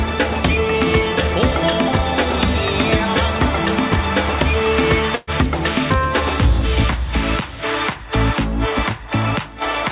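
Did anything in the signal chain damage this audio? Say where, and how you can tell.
Yes, a burst of packet loss at the network stage, from 5.15 to 5.30 s. About 120 ms went missing, and the receiver filled it by stretching the last sound and fading it, rather than leaving silence. That concealed stretch, with a skip forward once sound resumes, separates it from a plain dropout. The band limit at 4 kHz is simply the G.711 call codec.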